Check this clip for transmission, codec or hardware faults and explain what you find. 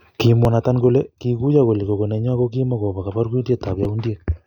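Two brief discontinuities break this speech, at 0.45 s and 3.85 s. At each, the sound jumps abruptly, with no gap of silence, as though a few milliseconds were cut out and the two sides spliced. That points to a likely dropped buffer (overrun): the capture software fell behind, the hardware overwrote samples not yet collected, and the remaining audio was joined end to end, losing only a sliver each time.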